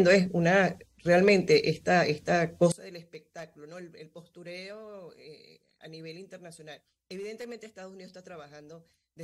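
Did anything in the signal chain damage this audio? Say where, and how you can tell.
Yes, from 2.72 s to the end the sound drops about 23 dB: one channel inverted, likely a reversed analogue lead, cancelling shared content in mono.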